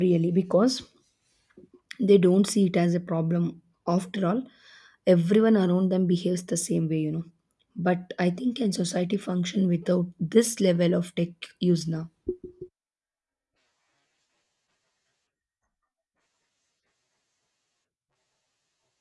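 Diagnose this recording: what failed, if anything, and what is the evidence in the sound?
Nothing in this speech recording points to a failure at any stage, so there's nothing here to diagnose.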